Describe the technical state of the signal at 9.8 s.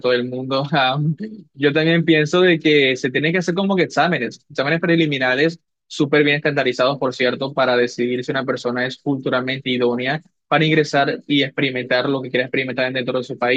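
At 9.8 s the signal is intact, with no audible fault at that point in the speech.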